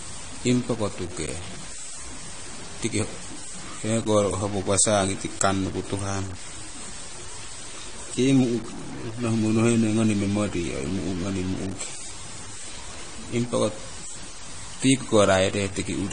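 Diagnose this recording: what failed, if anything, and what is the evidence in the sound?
Sample-format conversion: grainy distortion tracks the speech level throughout, with noise about 15 dB below the signal. This is likely low bit depth without dither, truncated to about 6 bits.

Codec stage: nothing above 10 kHz throughout, with different codec artefacts heard together. This is likely transcoding between lossy codecs, consistent with MP3 re-encoded as low-rate AAC-LC.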